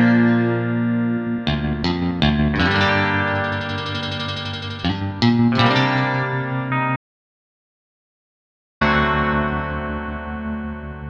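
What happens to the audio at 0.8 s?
Nothing goes wrong at 0.8 s; the audio plays through that moment intact, with no dropout, click or distortion.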